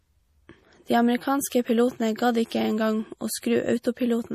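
MP3 compression throughout: the speech sounds plainly watery and dull, with nothing above 15.1 kHz, likely from a low-bitrate MP3 encode around 40 kbps that starves weak frequency lines. Pre-echo at 1.50–1.52 s, just before "pilotene gadd ikke en", and at 3.40–3.43 s, just after "ikke en gang å": quantisation noise spreads back from an attack, leaving a brief hiss of 22 ms and 27 ms that softens it.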